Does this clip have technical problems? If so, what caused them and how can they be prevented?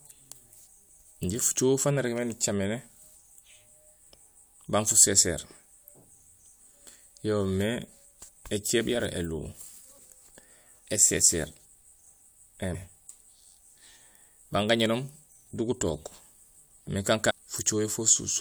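Yes. Damaged data in a compressed stream produces a short blip at 12.74 s and another from 17.29 to 17.31 s, where corrupted bytes make the decoder misread frames and lose sync until the next header. Checksummed, error-protected transport and verified file transfers prevent this.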